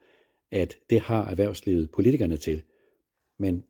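Speech clip, with two short rough patches where a lost packet was rebuilt from error correction: 1.49 to 1.55 s, right after "at det har", and 2.47 to 2.57 s. Both sound grainier and noisier for about 40 ms and 60 ms, which fits the decoder playing low-bitrate backup copies of missing packets, so there's no actual gap.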